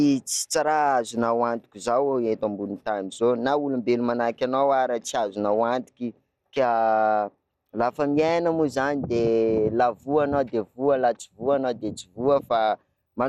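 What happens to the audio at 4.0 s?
At 4.0 s the speech sounds dull and gurglingly granular, with nothing above 16.4 kHz, as throughout the clip; likely MP2 compression at a rate near 80 kbps, switching off upper sub-bands and coarsely quantising the rest.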